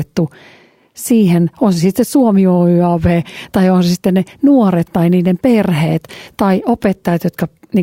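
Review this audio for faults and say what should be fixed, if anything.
No faults found; nothing to fix.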